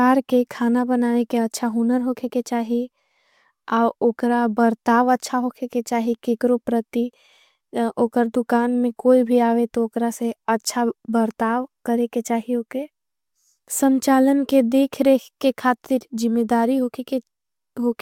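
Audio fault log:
Nothing stood out on listening to this speech recording.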